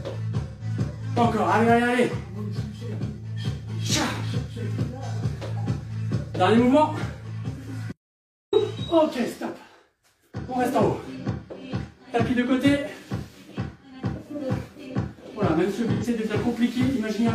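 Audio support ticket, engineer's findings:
AAC frame loss with concealment at 0.48–0.64 s (128 ms) and 15.92–16.04 s (85 ms): smeared, noisy patches, fitting about three and two lost frames, filled by the decoder from the last good spectrum. Unlike a dropout, sound never reaches silence.

Audio dropout to silence at 7.92–8.53 s (about 0.6 s): hard cut to silence, no room tone, then an abrupt return. Likely an input or link loss with the recorder writing zeros. Unlike concealment, there is no smearing or fade.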